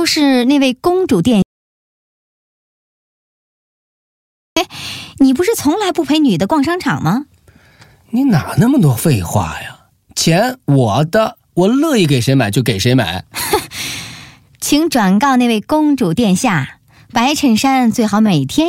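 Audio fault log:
1.42–4.56 s, audio dropout to silence: speech cuts out mid-flow for 3.14 s of silence with no room tone, likely input lost while recording continued.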